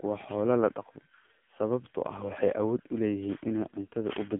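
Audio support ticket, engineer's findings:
AMR narrowband mobile codec, throughout: speech band-limited to 150 Hz–3.5 kHz, nothing above 3.7 kHz; heavy buzzy, synthetic pulse-model artefacts, consistent with a low AMR-NB mode around 6.7 kbps.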